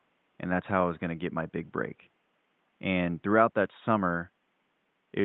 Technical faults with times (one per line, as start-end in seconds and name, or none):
none